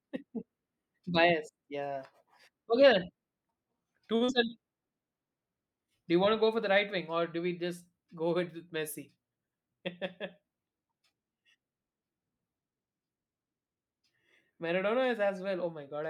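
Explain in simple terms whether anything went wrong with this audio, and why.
Around 4.15 s there's a short stall from a late packet. A chunk of the call arrived late, so the receiver held the last sound for about 50 ms until 4.23 s, then picked up where it left off. Nothing's lost, just a slightly stretched bit.

Right after, from 4.25 to 4.30 s, there's a short concealed packet loss. About 40 ms of audio never made it, so the receiver patched the gap by extending the previous sound. You hear a quick smear, and a tiny piece of speech is gone.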